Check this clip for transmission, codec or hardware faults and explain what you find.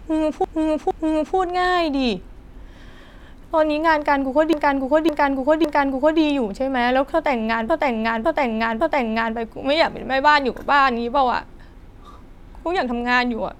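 Repeated frames occur three times in this speech. From 0.44 to 1.37 s, a 464 ms block plays two extra times, adding 0.93 s. From 4.53 to 6.20 s and again from 7.69 to 9.36 s, a 557 ms block plays three extra times, adding 1.67 s each time. Runs of compressed frames, about five or six per block, were delivered more than once, so the decoder replays them as a stutter.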